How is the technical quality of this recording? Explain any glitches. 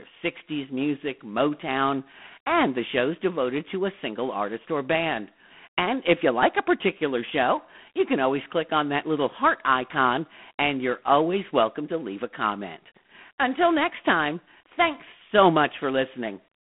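Quality is poor: the speech carries G.726 ADPCM coding damage for the whole clip. The codec sends only a few bits per sample describing the difference from a running prediction, so the error becomes a harsh, rasping hiss that rises and falls with the speech level. That roughness fits the 24 kbit/s mode. It differs from a perceptual codec's swirly, warbling artefacts, and the band is sealed at a telephone line's 200 Hz to 3.4 kHz, with nothing above 3.9 kHz.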